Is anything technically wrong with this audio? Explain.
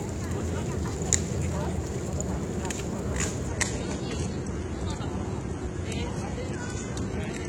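Yes. From 3.48 s to the end, the adaptive stream drops to a lower bitrate. The codec artefacts rise suddenly, with no gap, consistent with a switch to low-rate HE-AAC.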